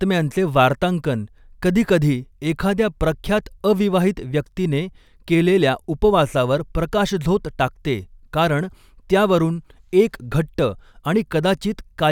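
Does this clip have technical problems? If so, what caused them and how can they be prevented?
No, this clip has no technical problems, so there is nothing to prevent.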